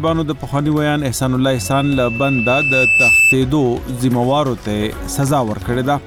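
There's loudspeaker feedback squeal from 1.50 to 3.36 s: a steady 2.6 kHz tone that swells over about a second and a half until it sits roughly 5 dB above the sound. The mic's hearing its own speaker, and the loop runs away at that frequency.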